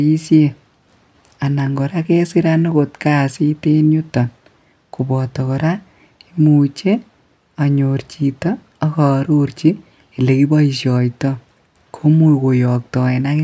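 No technical faults can be heard anywhere in the recording.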